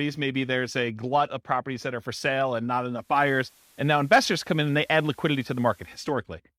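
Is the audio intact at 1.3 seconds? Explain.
Yes, the speech at 1.3 seconds plays through cleanly, with no dropout, click, distortion or other fault at that point.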